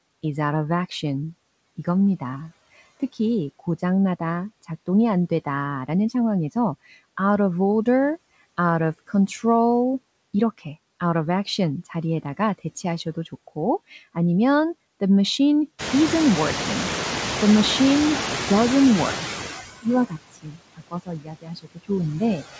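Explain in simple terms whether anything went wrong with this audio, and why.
Yes, several things went wrong, all caused by the noise suppressor, the part of the call system that tries to remove background noise.

Throughout the clip there are noise suppressor artifacts. Between phrases the background is pushed right down, then it comes back up underneath the speech, so the noise seems to breathe in and out with the talker. This differs from ordinary room noise, which would stay at a steady level rather than pumping with the speech.

Just after "좋고 아니면 the machine", around 16 s, the room itself gets much noisier, and from 15.78 to 19.21 s you can hear the noise suppressor catching up. For about three and a half seconds the louder noise comes through only lightly reduced, then it gradually sinks as the suppressor adjusts to the new level. The slow fade is the clue. The rise in noise is real, but the suppressor's delayed reaction is the fault.

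Near the end, the suppressor mistakes parts of the speech for noise. This speech cut by the noise suppressor affects about 20.31 to 20.6 s and again from 20.76 to 21.9 s. In those stretches the voice drops sharply, so parts of the speech seem swallowed or faint. It is different from the talker simply speaking quietly, because the voice sinks abruptly along with the background instead of fading naturally.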